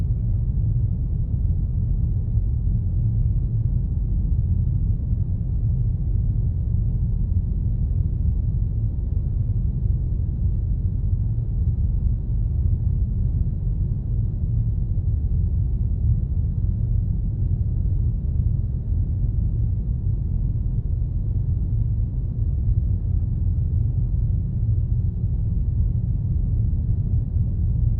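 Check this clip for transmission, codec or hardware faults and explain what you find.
No transmission, codec, or hardware faults.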